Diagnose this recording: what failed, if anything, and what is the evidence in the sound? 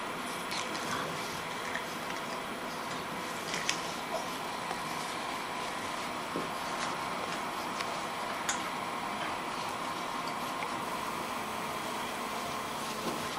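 GSM phone buzz enters at the analogue wiring stage from 10.82 to 13.28 s: a hard, raspy buzz at about 217 Hz, unrelated to the audio and sitting about 9 dB below it. A nearby 2G phone in a call bursts at that rate, and the audio circuit rectifies those radio pulses. A spectrogram shows evenly spaced horizontal lines at 217 Hz and its many harmonics, and the waveform shows a nearly steady pulse train.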